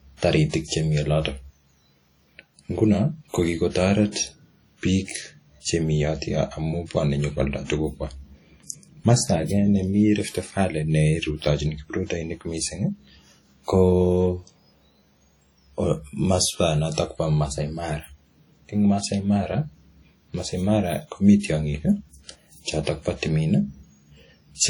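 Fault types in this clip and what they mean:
WMA compression: likely low-bitrate WMA coding, fitting roughly 32 kbps, leaves ringing, washy speech; a spectrogram shows smeared, patchy energy with gaps where weak components vanish.
Pre-echo: at 0.49 s and 16.94 s, hiss spreads about 40 ms ahead of sharp attacks, visible as a noise smear before each waveform onset.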